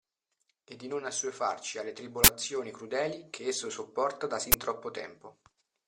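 A harsh, loud burst of digital noise hits at 2.24 s for 40 ms, just after "di non assuefarci alle", and again at 4.52 s for 20 ms after "che esso sopporta da". This is an uninitialised buffer: blocks played before audio was written, so leftover memory came out as samples.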